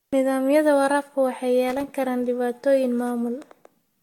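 A short speech clip with a hazy, swirly quality running right through it. The consonants smear, the tone goes hollow, and attacks feel blunted, more than a single pass at around 70 kbit/s would account for. Nothing comes through above 19.2 kHz. The likely cause is generation loss: the audio seems to have gone through Vorbis at roughly that rate about five times. Each re-encode quantises again on a shifted frame grid, so the noise and spectral gaps keep piling up. Separately, from 1.68 to 1.84 s, just before "karaan dhibaatooyin", there's a ragged burst of scratchy crackle. That's loose connector crackle, a worn or dirty contact rapidly making and breaking as it moves, which chops the signal.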